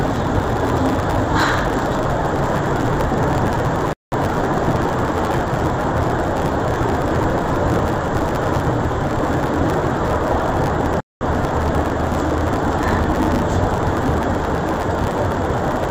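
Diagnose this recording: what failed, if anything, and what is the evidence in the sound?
A sample-format conversion stage treated interleaved stereo data as planar, reading the first half of each block as left and the second half as right. This interleaved audio read as planar fault runs through the whole recording. Each half plays at half speed, so the overall pace holds, but with blocks of 10 ms the sound turns dull and robotic, buzzing at a steady 100 Hz block rate, with no clear octave drop.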